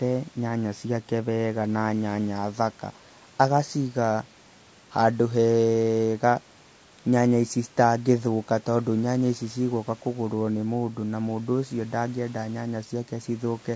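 A speech clip with plainly audible low-delay AAC compression throughout: the voice sounds rough and grainy, likely from AAC-ELD coding near 32 kbps, and a spectrogram shows smeared harmonics with noise filling the gaps between them. The call microphone processing leaves nothing above 8 kHz.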